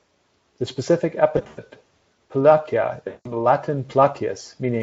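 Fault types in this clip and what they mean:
VoIP packet loss concealed by the speech codec: speech smears into a fading buzz at 1.37 s and 3.07 s while the decoder extrapolates across missing packets.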